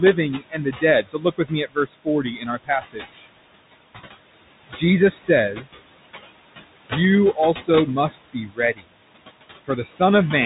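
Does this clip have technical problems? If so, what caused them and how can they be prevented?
Yes. Between phrases the background sinks away, then comes back under the speech. These are noise suppressor artifacts: the room noise, about 12 dB below the speech, is pulled down by about 19 dB frame by frame. Lowering the suppression strength, or reducing the noise at the microphone, would prevent this.

The whole clip sounds narrow and muffled, with nothing above 3.8 kHz, scratchy s sounds, and a grainy hiss under the speech. This is the Bluetooth CVSD headset codec, which fits a 64 kbps link sending one up-or-down bit per sample. Its adaptive step cannot keep up with loud high sounds. Using a wideband headset profile or a wired microphone would avoid it.

Parts of the speech also sound swallowed or faint, at 0.39–0.83 s, 1.02–3.27 s, 4.69–4.82 s, 5.54–5.93 s, 7.54–7.68 s, 8.09–8.93 s and 9.65–10.01 s. 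This is speech cut by the noise suppressor, which took part of the speech for noise and lowered it by about 11 to 22 dB. A gentler suppressor setting, or a cleaner signal for it to work on, would prevent this.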